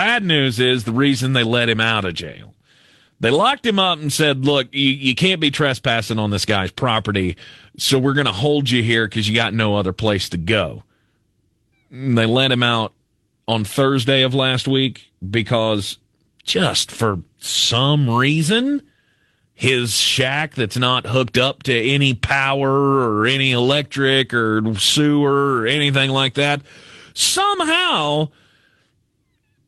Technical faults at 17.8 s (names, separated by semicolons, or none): none